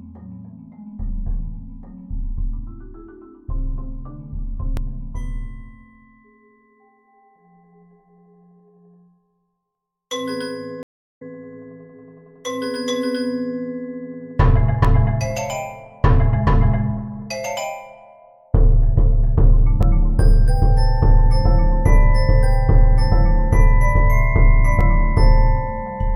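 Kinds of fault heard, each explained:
Audio missing between chunks: Tiny skips, each losing around 20 ms, with the two sides butted together and no gap, at 4.77, 14.85, 19.83 and 24.81 s. The roughly 5 s spacing points to a processor working in 5 s chunks, likely dropping a sliver at each handover.
Stream reconnect: At 10.83 s the sound cuts to about 0.3 s of silence, then returns by 11.22 s roughly a fifth of a second further on. The connection dropped, the player reconnected, and a fresh decoder started mid-stream, skipping what passed meanwhile.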